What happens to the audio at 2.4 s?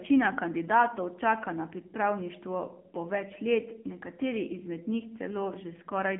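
At 2.4 s the speech is still passing through the AMR narrowband mobile codec, which runs through the whole clip. The codec rebuilds the voice from a vocal-tract model excited by a few pulses per subframe, so the result sounds plainly buzzy and synthetic. That level of damage fits a low AMR-NB mode near 7.4 kbps. The band is squeezed to a telephone line of roughly 200 Hz to 3.4 kHz, with nothing above 3.6 kHz.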